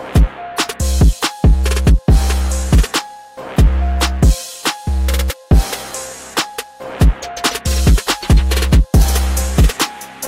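Nothing jumps out here at all, just the sound carrying on steadily with no glitches, dropouts or odd artefacts to point to anywhere along the way.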